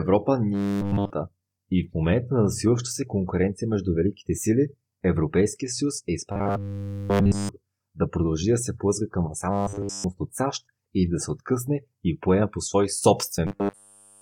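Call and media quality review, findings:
Robotic sound from repeated short buffers at 0.54–1.10 s, 6.32–7.49 s, 9.51–10.04 s, 13.47–14.22 s. Rigid metallic buzz at 100 Hz, fitting a 10 ms segment looped over nearly the whole span while fresh audio is skipped. Likely buffer underrun in the playback or jitter path. Unlike dropouts, there is no silence or gap. Unlike codec warble, the pitch stays fixed instead of smeared, while the sound's rough contour survives.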